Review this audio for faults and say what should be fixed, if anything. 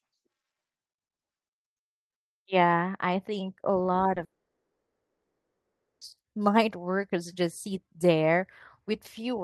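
At 4.15 s there's a short concealed packet loss: about 10 ms went missing, so the decoder carried the previous sound across the hole, leaving a tiny smear.

From 4.24 to 6.02 s the sound cuts to near silence, likely a long network dropout. Nearly 1.8 s never arrived, and the audio resumes without that stretch.

Both hit an Opus call path with its 12 kHz cutoff, so enabling in-band FEC and stabilising the network link should prevent them.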